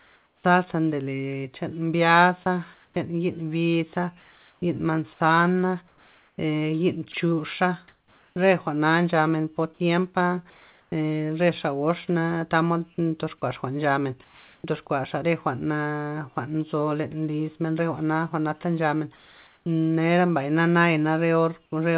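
Speech heard through a narrowband call path with nothing above 4 kHz, which fits G.711 mu-law. Comfort noise in place of the background appears at 0.0–0.44, 10.5–10.92, 13.38–14.64 (ending just before "ndox kuaxa") and 19.16–19.66 s. On a spectrogram these stretches show a smooth, featureless noise band in place of textured background, sitting about 33–38 dB below the loud parts and about 2 dB quieter at the first and last gaps. Between 2.44 and 8.36 s the sound is chopped by the voice detector, with about 1.7 s in total replaced. The waveform shows the sound giving way to uniform noise in two or more places. At 13.38–13.42 s the sound is dropped by the voice detector, losing about 20 ms of sound, which is replaced by comfort noise. The likely cause of all of these is discontinuous transmission, with the receiver filling silences with comfort noise.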